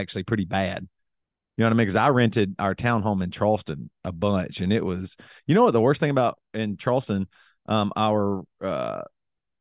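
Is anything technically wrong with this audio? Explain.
No, the speech signal shows no technical faults that a listener can hear anywhere in the clip.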